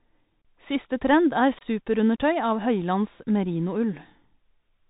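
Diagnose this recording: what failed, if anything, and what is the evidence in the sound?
The codec stage failed: the Bluetooth CVSD headset codec runs through the whole clip. Nothing reaches above 4 kHz, s sounds are scratchy, and a granular hiss sits under the speech, which fits a 64 kbps CVSD link. The one-bit delta modulator's adaptive step cannot keep up with loud high-frequency content, so that content distorts. A plain low-pass filter or a wideband codec would cut the highs cleanly, without this hiss or slope-overload roughness.

The wireless link also failed, with unconcealed Bluetooth headset packet loss. The speech drops out abruptly at 0.42 to 0.45 s, a 30 ms gap, and again at 1.59 to 1.63 s, 22.5 ms, just after "trend er". Each gap matches a few lost voice packets that were replaced with silence rather than repaired. The sound returns quieter for a moment as the CVSD step size rebuilds. 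Concealed loss would smear or repeat audio, while these holes have hard edges.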